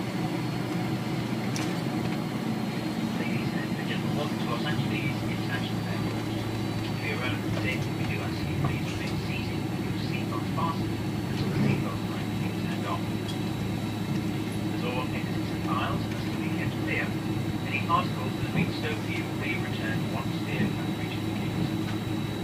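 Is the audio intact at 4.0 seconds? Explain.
Yes, at 4.0 seconds the audio plays through cleanly, with no dropout, click, distortion or other fault at that moment.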